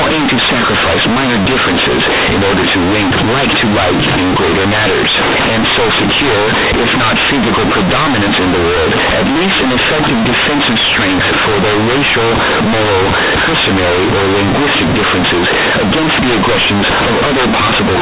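From the start to the end of the speech, the audio shows companded audio read as linear: A-law bytes from the 8 kHz telephone stream are played as plain 8-bit samples without expansion, so each sign change swings across half the range, giving loud, buzzy distortion and heavy noise in pauses.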